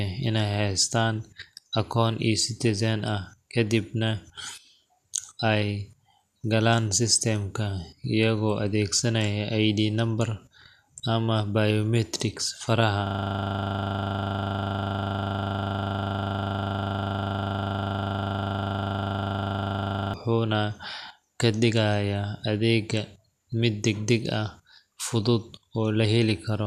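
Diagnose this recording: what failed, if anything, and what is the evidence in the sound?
The failure is at the driver or buffer stage. From 13.07 s to 20.14 s the speech stops moving forward and one 40 ms scrap of audio repeats exactly, over and over, about 177 times. At a 25 Hz loop rate that turns into a steady, rough buzz instead of a stutter. It's a classic system hang loop: the host or driver froze, but the sound hardware kept cycling the same ring buffer, which points to a buffer of about 40 ms.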